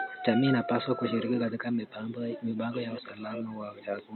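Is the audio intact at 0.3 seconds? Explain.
Yes, the audio is intact at 0.3 seconds, with only faint room noise, about 35 dB below the speech, beneath it as part of the recording itself.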